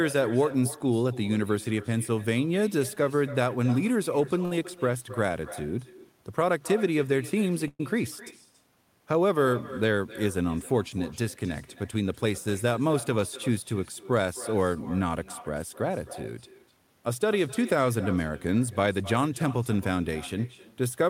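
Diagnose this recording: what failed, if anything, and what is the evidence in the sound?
Call processing failed at the far end: there is echo with no canceller, so the speech played on their loudspeaker is picked up by their microphone and returned. Throughout the clip every phrase is shadowed roughly 300 ms later by a thinner copy about 17 dB down.

On the network side, a short stall from a late packet sits at 4.45 to 4.52 s. The jitter buffer ran dry, and the receiver held the last sound for 57 ms until the packet arrived. It then resumed from the same point, leaving a stretched, slightly buzzy moment with nothing lost.

From 7.68 to 7.80 s the sound hangs as a fading buzz for 112 ms, including about 30 ms of silence, and then picks up exactly where it stopped. This is a call audio freeze, likely caused by packets held up in transit that emptied the jitter buffer.

Jitter buffer speed-up follows the delays. 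Between 11.94 and 13.49 s the speech runs at 106% speed, and between 16.56 and 17.28 s at 109%. The receiver trimmed short pitch-period slices, roughly 100 ms and 70 ms in total, so the speech sounds hurried at unchanged pitch.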